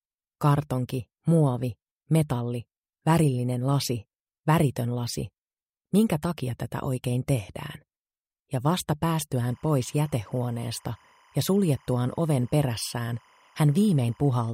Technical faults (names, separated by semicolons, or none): timecode bleed